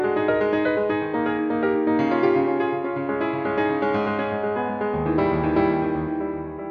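The music signal holds steady throughout, with no audible technical faults anywhere in the clip.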